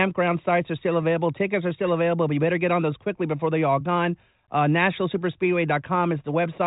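Nothing stood out on listening to this speech, which comes through the G.726 path at 40 kbit/s with its usual absence of sound above 3.8 kHz.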